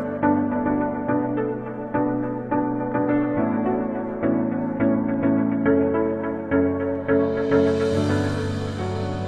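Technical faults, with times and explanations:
0.0 to 6.0 s, adaptive stream starting at a low bitrate: the opening section has thin, smeared treble that sounds regenerated rather than captured, with heavier codec artefacts, which fits a very low-bitrate parametric encoding around 16 kbit/s. At 6.0 s the player switches to a higher-quality rendition once it has gauged the connection, consistent with a full-band AAC stream near 96 kbit/s. The upper spectrum fills in abruptly, with no gap or dropout at the change.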